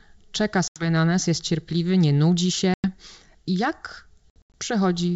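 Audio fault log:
0.68–0.86 s, 2.74–2.86 s, 4.30–4.54 s: packet loss on an ADPCM call. The first two are solid gaps of 80 ms and 100 ms. The third is 160 ms of dropouts scattered over 240 ms, with the longest 80 ms. Each hole is hard-edged silence. Speech then returns slightly distorted, because the decoder's predictor and step size have drifted from the sender's and need tens of milliseconds to realign. The 64 kbit/s G.722 wideband coding around the gaps shows faint or no damage.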